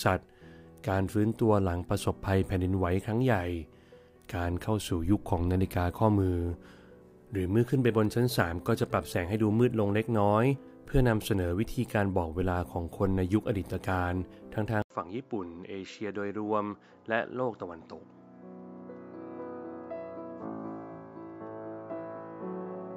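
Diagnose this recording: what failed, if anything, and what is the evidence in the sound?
At 14.82 s the input likely switched to a poorer device, at the driver or device-routing stage: an 80 ms silence, then nothing above 7.6 kHz, a level about 5 dB lower and a fresh noise floor to the end. A codec bandwidth drop wouldn't bring new noise or a level shift.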